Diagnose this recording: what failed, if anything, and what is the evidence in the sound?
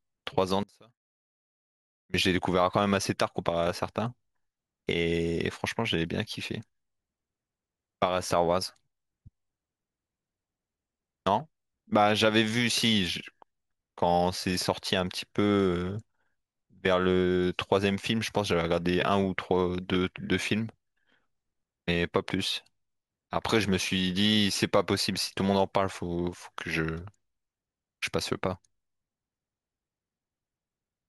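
Speech drops about 29 dB from 0.63 to 2.14 s: likely one channel inverted in wiring, cancelling the shared centre in the mono sum.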